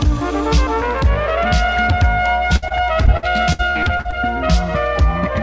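A steady mains hum runs through the whole clip. It is a low tone at 60 Hz, fairly loud, roughly 10 dB below the main sound. A ground loop or nearby transformer is feeding the power line into the signal.

From 2.56 s to 4.19 s there is repeated packet loss, giving a robotic sound. Short holes keep appearing, the longest about 64 ms. Each is patched by stretching the last sound, so the passage turns choppy. About a fifth of this stretch is filled in. Nothing is heard above 8 kHz, which fits the G.722 call codec.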